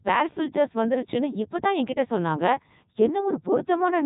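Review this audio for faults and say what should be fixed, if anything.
Codec 2 vocoder damage runs throughout. The speech sounds robotic and buzzy, rebuilt from sine waves. Nothing reaches above 3.8 kHz, which fits the 3.2 kbit/s mode. Use a waveform codec like Opus when bandwidth allows.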